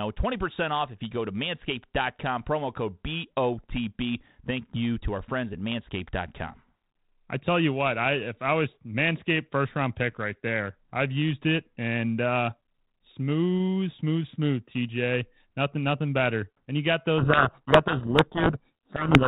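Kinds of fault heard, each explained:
Codec payload misread: the receiving side unpacks the G.726 code words with their bits in the reverse order from how the sender packed them, so each sample's difference value is rebuilt from the wrong bits and the adaptive predictor is steered by nonsense. From 17.18 s to the end of the clip at 19.27 s, the narrowband speech of the 32 kbit/s G.726 stream is buried under harsh, grinding distortion, with no return to clean decoding before the audio stops.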